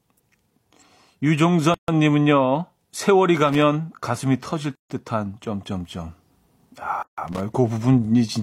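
At 1.74 s the speech drops into silence for about 140 ms, a gap at a join of encoded pieces, and it happens again at 4.75 s (about 149 ms) and 7.03 s (about 151 ms). The pieces were encoded separately and joined untrimmed, so encoder start delay and last-frame padding remain. Each gap has smeared edges, and the speech then resumes exactly where it stopped. Around these, at 3.49 to 3.62 s and again at 7.28 to 7.40 s, there are short irregular bursts of scratchy noise. This is loose connector crackle, a worn contact rapidly making and breaking. Unlike the joins, it adds noise rather than leaving clean silence.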